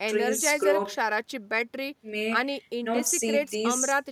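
No technical faults can be heard in the speech.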